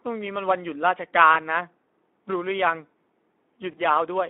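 A speech recording carries Speex codec damage throughout, and it is plainly audible. The voice sounds hoarse and noisy, with a rough edge. That points to a low setting, which fits a bitrate of around 11 kbps. Too few bits go to the excitation signal, so the fine detail of the voice is lost. The sound is also band-limited to a telephone line, from 250 Hz to 3.5 kHz. It is thin and lacks both low body and high air. Two dropouts show VoIP packet loss concealed by the speech codec. The first runs from 1.33 to 1.36 s. The second runs from 3.71 to 3.81 s. Each points to a single lost 20 ms packet. The decoder fills the gap by extending its last pitch and filter at falling gain. That gives a brief buzzy or smeared patch. The second patch stays wrong for longer than the loss itself, because each decoded frame builds on the damaged one before it.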